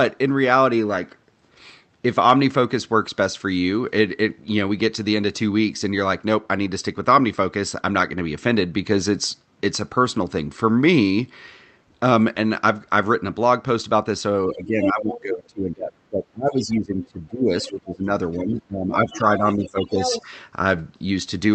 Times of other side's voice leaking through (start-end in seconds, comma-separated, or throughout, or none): 14.82-14.91, 18.33-18.37, 18.94-19.55, 20.01-20.22